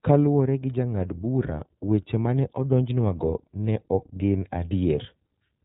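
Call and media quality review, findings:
iLBC codec in the media path, whole clip, 0 to end. Narrowband encode fits the 30 ms frame mode at about 13 kbps. Speech band cut off at 3.8 kHz: sibilants dulled, no air. Each frame's excitation coded independently, so plainly audible roughness and a synthetic, buzzy edge throughout.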